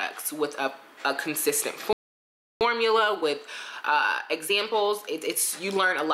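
The audio cuts out at 1.93 s and stays silent until 2.61 s. That is a gap of about 0.68 s in mid-flow. This is a playback stall. The player likely ran short of data, or its output thread was held up. Nothing reached the output until it recovered. The sound then resumes after the silence. From 2.61 s to 5.61 s the audio runs hurried. This is time-compressed catch-up. The player is working off the backlog the stall left behind. It drops small slices and cross-fades the joins. That plays the material about 1.1 times faster than normal. The pitch stays where it should be. The rush stops at 5.61 s, once the player has caught up.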